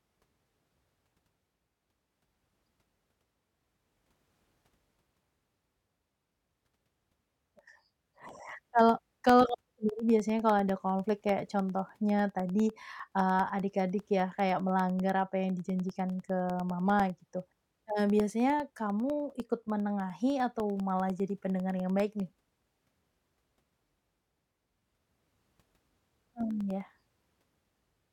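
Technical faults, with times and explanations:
0.09–28.01 s, periodic USB or driver dropouts: every 0.1 s a sliver of the speech, roughly half a millisecond, drops out and is replaced by silence, around three hundred gaps in all. Each abrupt cut in the waveform produces a tick, so the ticks form an even ten-per-second pattern that is audible only where there is signal and vanishes in pauses. That strict regularity distinguishes it from random crackle or occasional buffer underruns.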